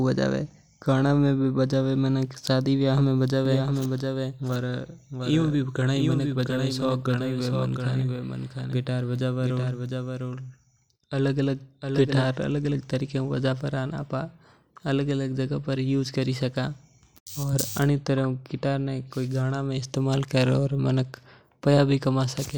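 A doubled audio track runs from 3.45 to 12.35 s in this speech clip. A second full-band copy trails the original by roughly 0.7 s, a few decibels quieter, starting and stopping abruptly with no decay, likely from a slower capture path mixing it back in.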